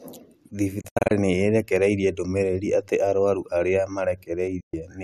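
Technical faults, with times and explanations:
0.81–1.11 s, digital broadcast dropout. The speech breaks into several short holes spread across about 290 ms. Together they remove about 170 ms of sound, and the longest single gap is 72 ms. Each cut fades out in about 8 ms. The receiver is muting damaged frames and resuming between them. The pattern fits roughly seven bad frames. The speech sent during the holes is lost.
4.60–4.74 s, digital broadcast dropout. The sound quickly fades out, with an 8 ms fade. It is silent for about 120 ms before returning. This points to a short run of failed frames, about five. Nothing from the gap is recovered.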